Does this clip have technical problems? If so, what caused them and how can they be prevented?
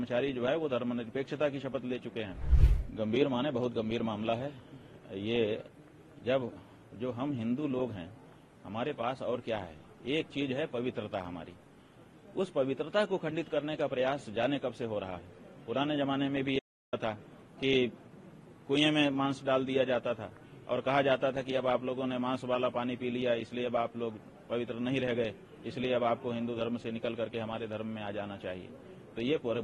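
Yes. An audio dropout to silence runs from 16.59 to 16.93 s. The sound cuts out for 334 ms with no room tone, leaving a flat line on the waveform and a black band on the spectrogram. The input was likely lost briefly. Secure cables and monitor input live.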